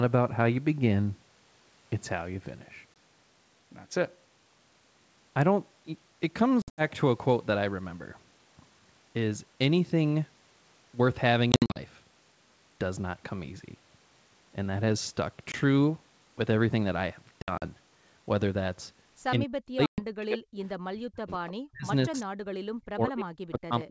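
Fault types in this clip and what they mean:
Packet loss on an ADPCM call: Hard-edged silent holes from 20 to 120 ms, with slightly distorted speech on return, as the decoder's predictor loses step.
Speech suppressed in double talk: From about 19.4 s the speech dips deeply, up to roughly 40 dB, or cuts out in pieces, likely from an echo canceller ducking during crosstalk.
Echo leak: A faint delayed copy, about 30 dB down and 179 ms late, surfaces briefly near 22.2 s, likely echo the canceller failed to remove.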